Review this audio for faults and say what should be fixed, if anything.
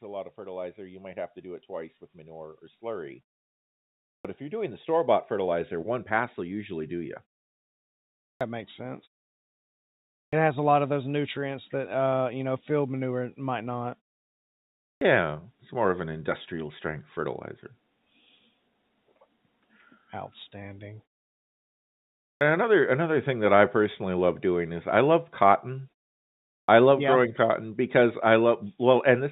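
Automatic gain rising from 0.05 to 7.21 s: the gain control judged the input too quiet and raised it by about 17 dB, swelling voice and background together.

Clipped start after a pause at 4.21, 8.37, 10.29, 14.97, 22.37 and 26.64 s: after silences of 0.8 to 1.4 s, the output device's wake-up swallows 36 to 43 ms of each onset.

To prevent both, keep the playback device active through silences and start the gain control at a calibrated level rather than ramping from low gain.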